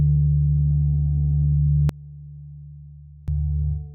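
From 1.89 s to 3.28 s the sound suddenly collapses, dropping by about 22 dB. What remains is faint, with its solid centre largely gone, before full level returns at 3.28 s. The likely cause is one channel inverted: one stereo channel has flipped polarity, so whatever the two channels share cancels when they are summed to mono, leaving only their small differences.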